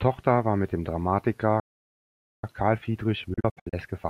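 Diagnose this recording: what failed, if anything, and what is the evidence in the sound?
Playback stall in the player: the speech halts at 1.60 s and is silent until 2.44 s, then resumes exactly where it stopped, likely from a starved buffer.

Time-compressed catch-up from 2.44 s to the end: the speech runs 1.25 times fast yet keeps normal pitch, unlike a simply sped-up playback.

Digital broadcast dropout in reception, 3.34 to 3.74 s: several short holes with 8 ms fades, the longest 64 ms, about 224 ms lost and skipped rather than resumed.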